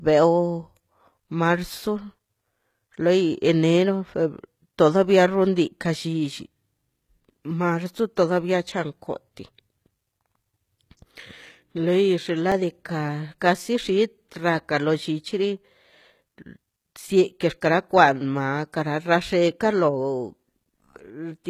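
Speech, with plainly audible codec damage throughout that points to HE-AAC compression, likely at a low rate around 20 kbps. Nothing is present above 14.9 kHz, and the sibilants sound gritty and metallic because the treble is rebuilt from copied lower bands rather than coded directly. At 11.18 s and 12.52 s there is an underrun with held sample. The output froze at its last value for 1.45 ms, a gap of 64 samples. Each event lost roughly a millisecond and a half of live audio.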